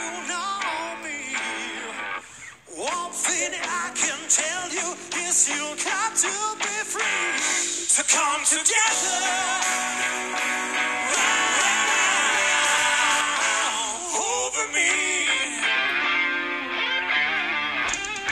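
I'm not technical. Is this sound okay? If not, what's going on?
No. From 11.17 to 13.21 seconds there is a doubled audio track. The same sound plays twice, with a second, equally loud copy about half a second behind. It starts and stops abruptly. The likely cause is a slower second recording path.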